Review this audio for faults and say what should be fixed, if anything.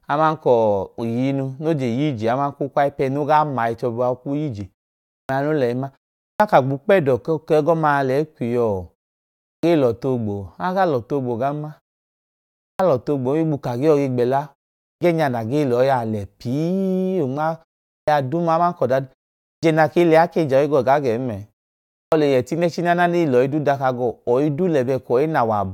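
The output device drops into a sleep state during short pauses and needs time to wake again before it plays. That produces a clipped start after a pause at 5.12, 6.24, 9.48, 12.62, 14.84, 17.92, 19.45 and 21.97 s, each after silences of only 0.35 to 0.89 s. Roughly 150 to 180 ms of speech is lost each time, so words jump in abruptly without their opening sounds. Keep the output path active through pauses, or send a low-level keep-alive signal, so the device never needs to wake when speech resumes.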